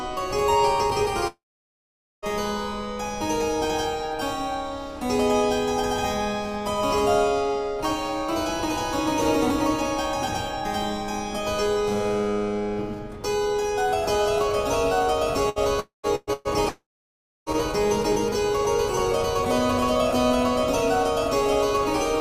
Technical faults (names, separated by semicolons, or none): long network dropout; burst of packet loss